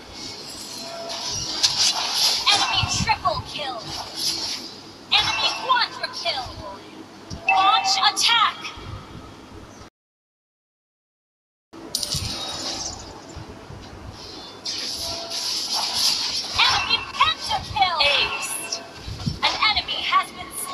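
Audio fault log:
9.88–11.73 s, rebuffering stall: playback runs dry and falls silent for about 1.8 s, then picks up exactly where it stopped because the player waited for more data. Unlike a dropout, no sound is skipped; the pause only adds time.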